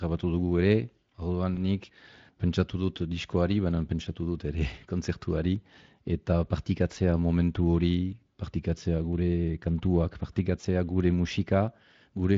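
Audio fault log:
1.55 s, just before "nik pentsatu": VoIP packet loss concealed by the speech codec. A brief buzzy or noise-like smear replaces about 20 ms of sound, with a weak or distorted tail after it. One packet, likely a single frame, went missing, and the decoder filled the gap by repeating its last pitch and spectral shape at falling gain. Because each new frame is built on that guessed state, the sound stays weak for a moment after real packets resume.
10.61 s, right after "partikatzea gure kantuak": VoIP packet loss concealed by the speech codec. The same short buzzy or noise-like patch covers about 20 ms, fading rather than going silent, with a weak or distorted stretch after it. A single lost packet was bridged by extrapolating the previous pitch and filter at falling gain, and the decoder took a brief moment to recover once packets were back.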